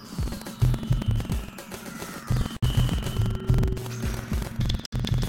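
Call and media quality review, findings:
Buffer tearing, whole clip: the writer and the hardware reader of the playback ring buffer have slipped and cross inside every period, which fits a 2048-sample buffer. About a tenth of each buffer replays music roughly a tenth of a second old, with hard joins either side. The result is a steady robotic buzz at 21.5 Hz riding on the music, present wherever there is signal.

Gap at a join of encoded pieces, 2.57–2.63 s (60 ms) and 4.86–4.93 s (66 ms): separately encoded segments were concatenated untrimmed, so encoder start delay and final-frame padding remain as silence. The music drops out, edges codec-smeared, then resumes where it stopped.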